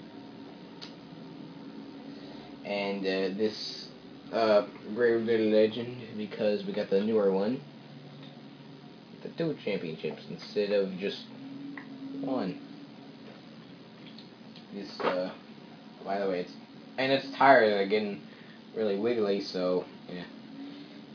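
No technical faults are audible.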